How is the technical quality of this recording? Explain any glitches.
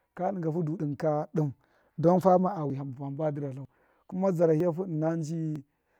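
The recording has one recurring glitch: short, evenly spaced skips in the speech.

Audio missing between chunks at 1.75, 2.70, 3.65, 4.60 and 5.56 s: the recorder likely works in one-second blocks and drops roughly 50 ms at each handover, splicing the two sides together without a gap, so the speech jumps abruptly, clipping a fragment of sound every second or so.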